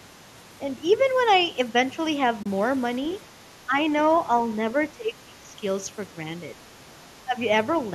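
AAC frame loss with muting occurs at 2.43 to 2.46 s. The decoder zeroed the missing audio and the overlapping windows faded out and back in, leaving a soft-edged gap of about 30 ms in the speech. That gap fits roughly three lost short frames.

Speech suppressed in double talk is the likely cause of three dips, at 3.66 to 3.79 s, 4.92 to 5.56 s and 7.25 to 7.36 s. An echo canceller that could not separate the talker from loudspeaker echo would pull the level down, here by around 10 dB in the short dips and nearer 15 dB in the longest. That makes the speech sag in patches.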